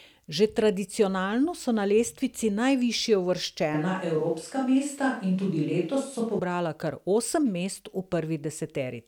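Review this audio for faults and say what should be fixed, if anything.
From 3.74 s to 6.39 s the speech abruptly turns roomy and hollow, with thinner bass, then snaps back just as suddenly. This is likely a switch to a distant microphone after the close microphone's feed dropped out. The level stays about the same and the room noise sits roughly 35 dB below the speech. A low-frequency cut would thin the sound without adding room reflections, so that would sound different. Monitoring the close microphone during recording and keeping a backup lavalier would prevent this.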